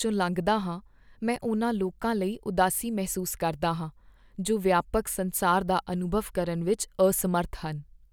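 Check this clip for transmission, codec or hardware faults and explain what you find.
Two clicks point to dropped samples in this speech. A handful of samples, about a tenth of a millisecond, likely went missing from the stream, so the waveform jumps abruptly. This is heard as a single sharp click at 3.31 s, just after "ਉਨ੍ਹਾਂ ਲੋਕਾਂ ਲਈ ਉਦਾਸੀ", and at 5.93 s, just before "ਅਨੁਭਵ ਕਰਨ ਵਿੱਚ".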